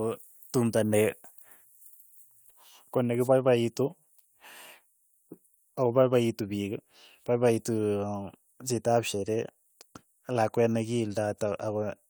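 Nothing in the speech stood out as a technical problem on listening.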